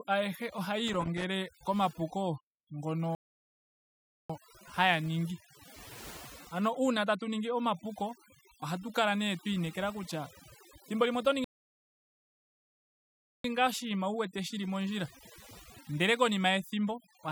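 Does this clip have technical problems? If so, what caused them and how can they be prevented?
Yes. Overdone noise removal runs through the whole clip. Bands near the noise estimate are cut hard, so the background twinkles. Prevent it by using gentler reduction settings.

Loose connector crackle appears from 0.88 to 1.24 s, just after "ayehe ohaya". A contact makes and breaks, chopping the signal into scratchy bursts. Prevent it by cleaning or replacing worn connectors.

Playback stalls occur at 3.15 to 4.30 s, silent for 1.15 s before "haya ningi", and at 11.44 to 13.44 s, silent for 2.0 s between "kutya thimbo limwe oto" and "ngaa oshinima wu wete". The player likely ran short of data. Prevent it with larger buffers and a steadier data supply.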